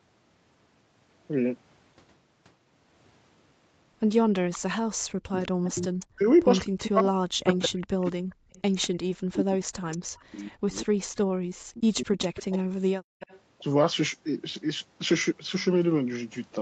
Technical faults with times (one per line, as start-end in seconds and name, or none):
4.53-6.06 echo leak
4.95-5.64 background gated by the echo canceller
6.06-12.38 speech suppressed in double talk
7.52-10.24 echo leak
12.24-13.40 echo leak
13.00-13.20 background gated by the echo canceller